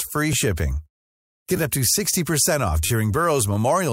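At 2.86 s the playback device ran dry because fresh audio did not arrive in time, so it played its last buffer again, a repeated buffer fault. A 10 ms slice of the speech sounds four extra times in a row, up to 2.90 s, with a hard join at each repeat. With such a short buffer, the effect is a brief buzzy stutter rather than an audible echo, and essentially no audio is lost.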